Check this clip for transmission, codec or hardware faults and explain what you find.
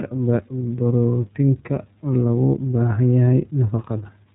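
One fault is present from start to finish: the iLBC codec. The speech sounds band-limited and plainly rough and synthetic, because each 30 ms frame's excitation is coded independently, with nothing passing above 3.8 kHz, consistent with the 13.33 kbps mode.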